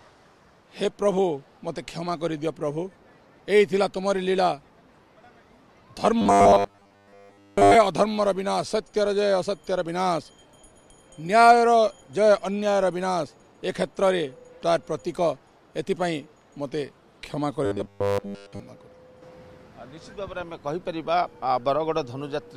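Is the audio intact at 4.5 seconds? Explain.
Yes, the audio is intact at 4.5 seconds, with nothing to hear there that points to a technical fault.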